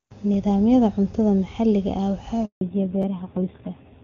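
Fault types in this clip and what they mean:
handover gap: At 2.45 s the sound drops out and stays silent until 2.61 s, a gap of 160 ms. The call was being passed from one network to another, and no speech frames arrived during the switch. The level falls away within a few tens of milliseconds rather than stopping with a click. Whatever was said inside those 160 ms is simply gone. Sound resumes only when the new link starts carrying frames.
fallback to narrowband: From 2.61 s to the end, everything above 4 kHz is missing. Before the handover the call ran as HD Voice, with a wide, clear top end that fits a high AMR-WB rate. After it, the call came back on an older narrowband codec. The change is immediate. Sibilants lose their hiss, the voice turns duller and boxier, and a rough, buzzy grain appears, consistent with a low AMR-NB rate around 5.9 kbit/s.
chunks out of order: At 3.02 s, a 10 ms slice of audio plays one slot later than it should. 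It arrived or was written late and was placed after the chunk that should follow it. Nothing is missing, but the sequence is wrong, leaving three hard joins where waveforms meet without matching. These are heard as a brief jumbled flicker in the narrowband speech. The effect is very short.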